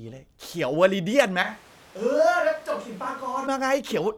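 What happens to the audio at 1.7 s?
At 1.7 s the close microphone has likely dropped out, so the recording falls back to a distant microphone from 1.43 s to 3.47 s. With the pickup now far from the talker, the speech turns suddenly roomy and hollow and loses its low end. The level falls by roughly 10 dB, and room noise rises to about 25 dB below the speech. The sound snaps back just as abruptly when the close signal returns at 3.47 s.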